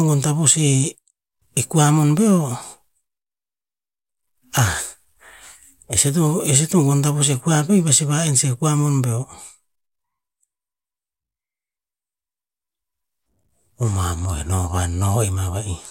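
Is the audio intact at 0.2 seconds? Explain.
Yes, the speech at 0.2 seconds plays through intact, with no dropout, click, distortion or other fault at that moment.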